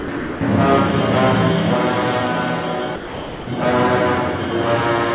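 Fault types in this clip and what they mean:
Sound dropped by the voice detector: the audio gives way to steady low-level noise at 0 to 0.08 s, 0.17 to 0.41 s and 2.96 to 3.47 s, then returns. The likely cause is the sender's voice detector classing that passage as background and stopping transmission, with the receiver filling the gaps with comfort noise. The longest gap is 510 ms, and the surrounding audio has nothing above 4 kHz.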